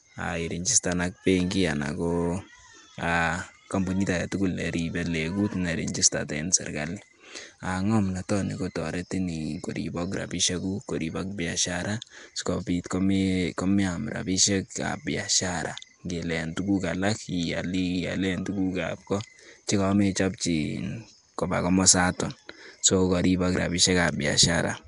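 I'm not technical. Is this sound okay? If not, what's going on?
No. The speech sounds rough and hissy the whole way through. It has a smeared, underwater quality, as if heard through a cheap old web microphone. This is likely Nellymoser compression, the voice format used by old Flash recordings. It saves space by giving each short slice of sound very little detail. Weak frequency bands get filled in with noise, which makes the hiss. Nothing is heard above about 10.6 kHz, so the sound also lacks its crisp top end.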